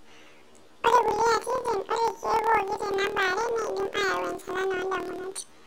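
Speech running an octave high throughout, with a flutter at about 38 Hz, because planar audio is read as interleaved. Each 26.12 ms block stores all left samples and then all right ones, so each block plays twice at double speed, once per channel.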